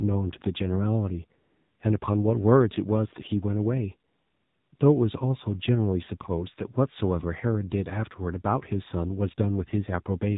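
A speech recording carrying the AMR narrowband mobile codec throughout: everything above 4 kHz is gone, and the voice sounds plainly buzzy and synthetic, which fits a low rate around 7.4 kbps. Unlike a simple low-pass filter, the pulse-driven vocal-tract model adds this artificial, metallic texture. AMR comfort noise replaces the real background at 1.42–1.80 s, 2.00–2.02 s, 4.12–4.72 s and 4.76–4.80 s. The transmitter judged these moments silent and stopped sending speech frames, and the receiver filled them with smooth generated noise. That noise switches in and out, which separates it from a dropout, where the sound would fall to true silence.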